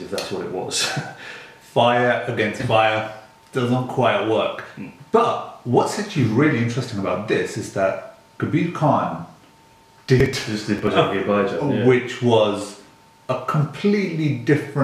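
From 10.20 to 10.87 s, processor overload crackle: about fifteen audio buffers of around 5 ms each missed their deadlines again and again over the stretch and were skipped, leaving a run of tiny hard-edged gaps. Unlike a single dropout or level clipping, it's a gritty, irregular tearing that stops once the load passes.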